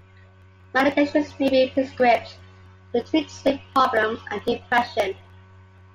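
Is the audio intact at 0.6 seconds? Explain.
Yes, at 0.6 seconds the speech plays through intact, with no dropout, click, distortion or other fault audible at that moment.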